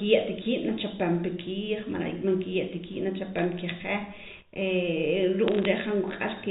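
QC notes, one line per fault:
3.39 to 3.44 s, bit errors on a digital phone line: A short burst of sharp ticks sits over the speech. Single bits in the 8-bit samples have flipped, roughly three in a thousand. Each flip changes one sample, and a hit on the sign or a high bit throws it far off, giving a click.
5.48 to 5.65 s, bit errors on a digital phone line: A longer run of the same crackle is heard. The band-limited A-law sound around it, which fits a 64 kbps line, is unchanged.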